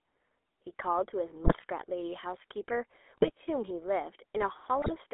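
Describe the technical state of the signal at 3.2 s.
At 3.2 s the signal is in a burst of GSM bit errors running from about 3.17 to 3.30 s. Corrupted bits reached the speech decoder, so the filter, pitch and gain values it rebuilt for those frames were wrong. The spectrum bends and the level jumps, and the speech turns into squawks, pops and gargling for about 0.12 s, which fits several consecutive damaged frames. Lost packets would leave a gap or a smoothed-over repeat. Here wrong data produces loud, garbled sound instead.

Underneath, and throughout the clip, is the GSM full-rate codec, with damage that is plainly audible. It models the vocal tract and drives it with a sparse, regularly spaced pulse excitation, which fits a 13 kbps full-rate stream. The voice sounds buzzy and gravelly inside a line band of 300 Hz to 3.5 kHz. That roughness is what separates it from a clean telephone band-limit, which only sounds muffled.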